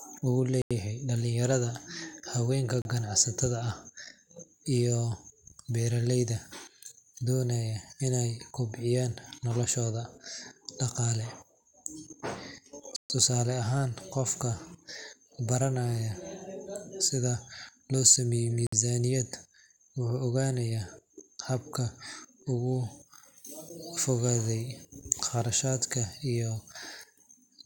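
Speech, interrupted four times by brief dropouts to silence: 0.62 to 0.71 s (about 90 ms), 2.82 to 2.85 s (about 33 ms, just before "ganacsatada ah"), 12.96 to 13.10 s (about 136 ms) and 18.67 to 18.73 s (about 57 ms). The audio resumes after each gap. This pattern points to a likely Bluetooth stall, where radio interference delays packets, the headphone buffer empties, and playback halts until retransmitted data arrives.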